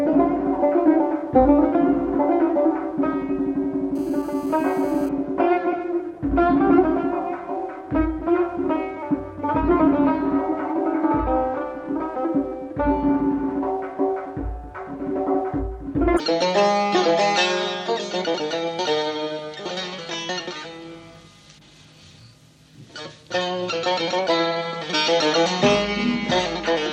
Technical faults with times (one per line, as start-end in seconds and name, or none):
3.95-5.09 GSM phone buzz